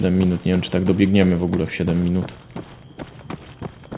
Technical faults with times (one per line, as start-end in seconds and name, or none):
none